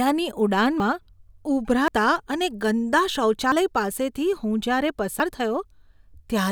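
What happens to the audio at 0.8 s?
At 0.8 s the speech jumps ahead, skipping roughly 40 ms, likely a dropped buffer (overrun), where samples were overwritten before being read.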